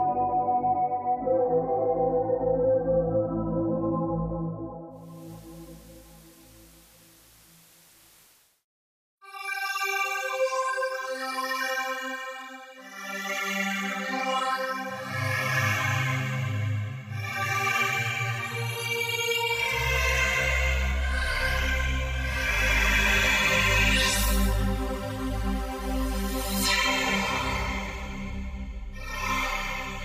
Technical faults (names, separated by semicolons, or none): digital radio blending to analogue